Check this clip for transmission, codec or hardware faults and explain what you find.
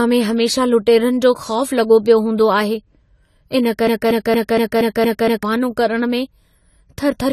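Two faults are present: codec damage across the whole speech recording and a repeating loop near the middle.

AAC compression runs throughout. Nothing remains above 14.1 kHz, and the damage is plainly audible as dullness and a warbling, smeared texture. This likely comes from AAC-LC at a low bitrate, which fits around 32 kbps. Unlike a simple low-pass filter, the coder also smears detail below the cut-off.

A broken-record loop runs from 3.87 s to 5.43 s. A 0.23 s fragment repeats seven times back to back. The likely cause is a stalled player or stream resending its last held fragment, so the audio from that stretch is lost. Unlike echo, each repeat is exact and the level stays the same.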